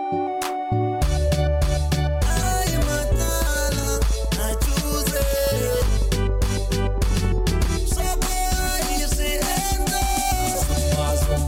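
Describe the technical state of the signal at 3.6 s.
A steady ticking runs over the sound here, regular pops at about 7.3 per second, some forty in all, peaking roughly 5 dB above the signal. This train of clicks spans 3.01 to 7.66 s and is likely interference pulses from nearby equipment or a faulty connection or power supply.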